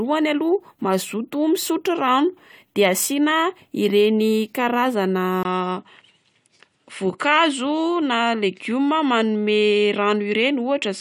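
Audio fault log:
5.43 to 11.0 s, input switched to a poorer device: after a gap of about 20 ms, the audio loses everything above 10.3 kHz and carries a new background noise roughly 55 dB below the signal, while the level stays about the same. The likely cause is the recording moving to a narrower-band microphone or headset path. The brief silence at the join and the changed noise floor set this apart from a filter or codec narrowing on one unchanged input.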